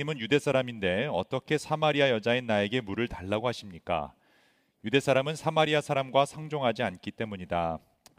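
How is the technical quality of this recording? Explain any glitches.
The technical quality of this recording holds up, with no glitches to explain.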